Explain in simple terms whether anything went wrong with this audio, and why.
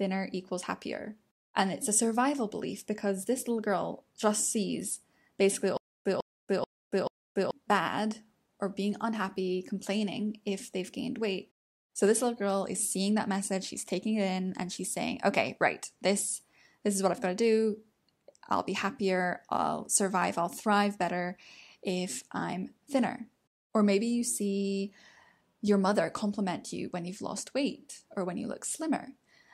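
From 5.77 to 7.51 s there is a stutter with silent gaps. A 151 ms scrap of speech plays four times, each followed by 283 ms of dead silence. The likely cause is a stalled player replaying its last fragment, so the speech meant for that stretch is lost.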